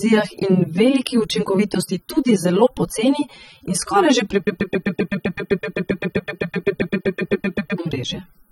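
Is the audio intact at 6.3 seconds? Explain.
No. A broken-record loop runs from 4.47 to 7.78 s: a 129 ms fragment repeats back to back, about 26 times, most likely because the player or stream stalled and kept resending its last buffer. The audio due in that stretch is lost.

AAC compression also runs through the whole clip, including 6.3 s. The sound is dull and smeared, with a warbling, fizzy edge on sibilants and nothing above 16.5 kHz. This most likely comes from AAC-LC at a low bitrate around 24 kbps, which thins out the spectrum.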